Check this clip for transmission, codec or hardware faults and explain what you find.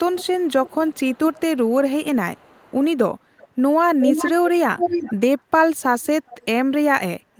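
An echo leak recurs six times: 0.12–1.41 s, 2.35–2.86 s, 3.37–3.48 s, 3.99–4.31 s, 4.77–5.15 s and 6.26–6.45 s. In each, a delayed copy of the speech trails the original by 378 ms. It is mostly faint, about 20 to 35 dB down, but at 3.99 s and 4.77 s it is about as loud as the speech. The likely cause is a loudspeaker endpoint whose echo canceller let microphone pickup of the call back into the return path.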